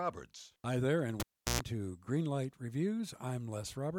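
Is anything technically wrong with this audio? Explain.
Yes. A cable was pulled and plugged in while the speech was running. It starts at about 1.20 s with a sharp pop as the connection breaks. The signal then drops to near silence for roughly 0.36 s. As the plug goes back in, only its tip touches at first. The ground is not yet connected, so a 60 Hz mains buzz bleeds through for about 0.12 s. A second pop marks full contact, and the speech returns by 1.61 s.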